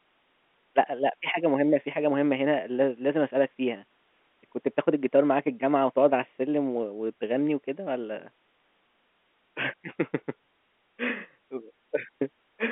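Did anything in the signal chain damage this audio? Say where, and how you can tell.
No, nothing in the signal chain damages this speech. It carries the narrow line band of G.711 telephone coding, about 200 Hz to 3.5 kHz, and any quantisation noise riding under the speech is faint at most.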